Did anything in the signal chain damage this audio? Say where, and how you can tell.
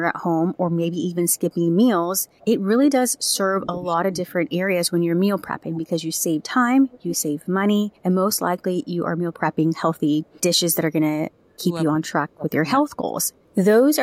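Yes, the damage happened in call processing. A delayed copy of the speech trails the talker from 1.32 to 3.38 s, 6.15 to 7.45 s, 9.39 to 10.76 s and 13.27 to 13.55 s. It lags by 293 ms each time. It is loudest around 6.2 to 7.5 s, roughly 15 dB down, and elsewhere sits well below the voice. This is likely an echo leak: a far-end loudspeaker was picked up by its microphone, and the echo canceller let part of it return.

The talker's own voice sinks sharply from 3.6 to 5.9 s, 7.89 to 8.66 s and 11.21 to 13.25 s. It drops by roughly 25 to 30 dB at its deepest and sounds dulled or gapped in pieces. This is likely speech suppressed in double talk: both ends spoke at once, and the echo canceller could not separate the near talker from the loudspeaker echo, so it attenuated everything.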